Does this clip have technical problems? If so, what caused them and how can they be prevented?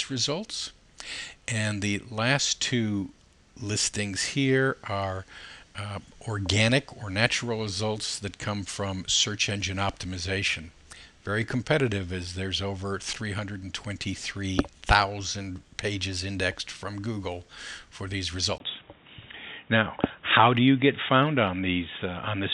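Yes. At 18.58 s the sound turns dull and boxy through to the end, after a 20 ms gap, likely from the input switching to a poorer device. A spectrogram shows everything above 3.8 kHz vanishing, a new noise floor around 40 dB down, and a level step of around 5 dB. Lock the recording input to one device and disable automatic switching to headsets.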